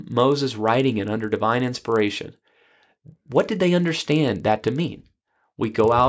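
From start to finish there's a rough 25 Hz tick train riding on the speech. That's the resampler restarted on every block: the 48 kHz to 16 kHz conversion runs on 40 ms chunks independently, so each block edge leaves a small glitch.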